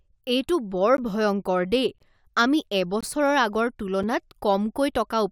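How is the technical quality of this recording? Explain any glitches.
The speech is interrupted by four short silent holes spaced almost exactly one second apart, which points to a gap between stream segments at each boundary of one-second segments. At each boundary the timestamps of adjacent segments fail to meet, and the player fills the space with silence. Each hole has hard edges. What sets this apart from a dropout is that no sound is missing. The speech stops and then resumes exactly where it left off, only delayed.

The first gap is at 0.97 s and lasts about 13 ms, between "এইটো বৰ" and "ভয়ংকৰ দেই আমি". The second runs from 1.98 to 2.00 s, about 19 ms, just after "এইটো বৰ ভয়ংকৰ দেই". The third runs from 3.01 to 3.03 s, about 20 ms, following "বৰ ভয়ংকৰ দেই আমি". The last is at 4.03 s and is only about 6 ms.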